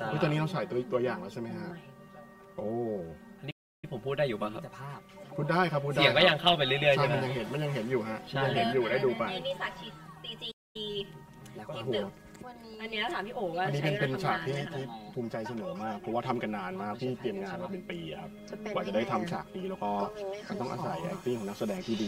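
Channel delay causes comb filtering across the whole clip. One channel trails the other by about 5 ms, and the two are summed to mono. Shared content cancels at evenly spaced frequencies, starting near 100 Hz. The result sounds hollow and phasey throughout.

At 3.50 s a playback stall cuts the sound to silence for 0.32 s. A second playback stall at 10.51 s silences it for 0.24 s. The likely cause is the player running short of data. Each time, the sound halts abruptly, then resumes.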